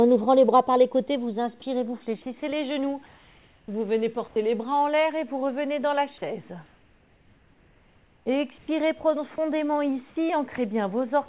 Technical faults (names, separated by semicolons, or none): sound dropped by the voice detector; comfort noise in place of the background